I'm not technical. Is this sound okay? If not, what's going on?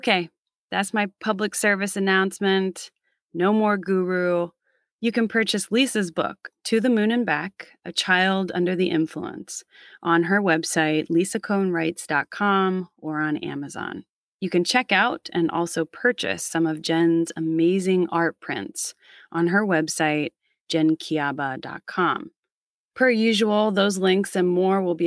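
Yes, nothing in this recording points to a technical problem.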